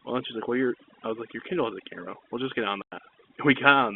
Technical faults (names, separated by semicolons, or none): overdone noise removal; packet loss filled with silence